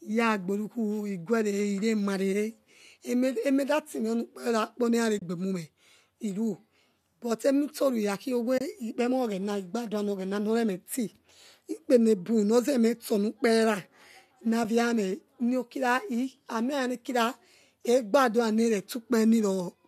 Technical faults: AAC frame loss with muting

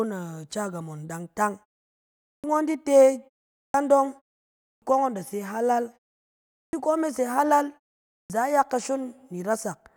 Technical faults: clipped start after a pause

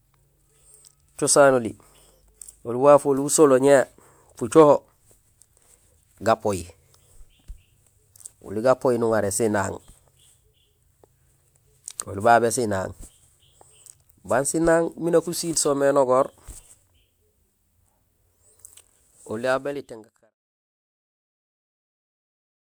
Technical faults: none

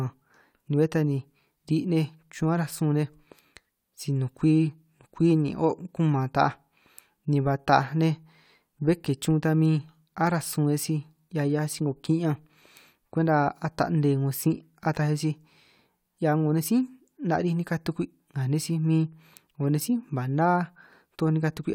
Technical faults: none

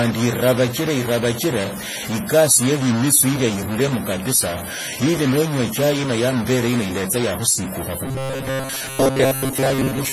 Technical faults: stuck bit; WMA compression; robotic sound from repeated short buffers

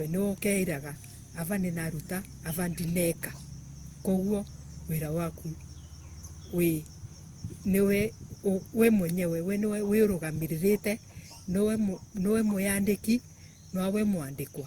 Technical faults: generation loss

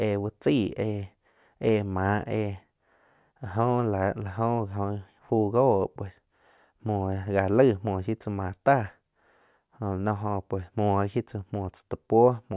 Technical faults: none

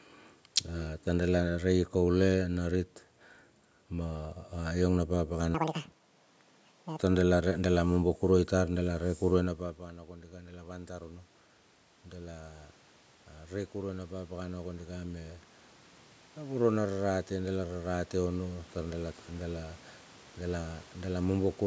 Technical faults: section at the wrong speed; automatic gain rising

